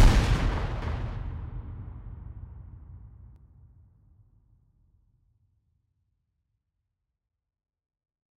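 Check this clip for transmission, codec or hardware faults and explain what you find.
One fault is present: a doubled audio track from 0.82 s to 3.36 s. Across that span, a second copy of the audio trails the original by roughly 300 ms and sits about 5 dB lower. The copy is full-band and dry, with no decay or room colour. It cuts in and out abruptly at both ends. The likely cause is the same signal captured a second time through a slower path, or two edited copies left out of step.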